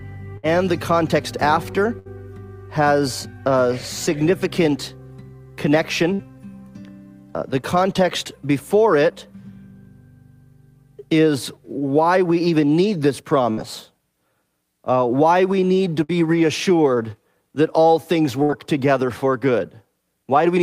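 Bursts of packet loss at 0.37, 1.99, 6.13, 13.51, 16.03 and 18.43 s: each time about 60 ms goes missing, bridged by a fading held buzz or hiss, then sound resumes further on.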